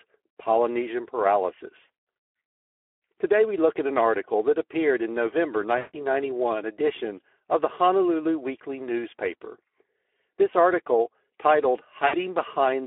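Throughout, the speech passes through the Speex codec at a low bitrate, which sounds like roughly 11 kbps, inside a telephone band of 300 Hz to 3.4 kHz. With so few bits for the excitation signal, the CELP coder approximates the voice's buzz and breath coarsely. The damage is plainly audible: a hoarse, noisy grain over every voiced sound, and nothing above 3.4 kHz.

At 5.77 to 5.96 s, packets are lost and the Speex decoder conceals the gap by repeating its last pitch and filter while turning the gain down. The result is a 160 ms stretch that fits about eight 20 ms frames. The voice smears into a buzzy tone or coloured noise that fades, and the speech stays weak briefly after the packets return. A shorter dropout at 12.07 to 12.14 s covers about 60 ms, roughly three frames, and leaves a brief, fading smear in the same way.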